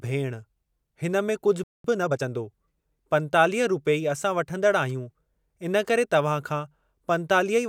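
Right after "हिन में कुझु", at 1.64 s, the speech just drops out and there's dead silence until 1.84 s, about 0.21 s of nothing in mid-flow. That's a playback stall. The likely cause is the player running dry of data, or its output thread getting blocked, so nothing reached the output until it recovered.

Straight after, from 1.84 to 2.24 s, you get time-compressed catch-up. The player is clawing back the backlog that built up during the gap by snipping out small slices and cross-fading over the joins. Here that works out to roughly 1.5 times normal speed, so that stretch sounds hurried while the pitch stays where it should be.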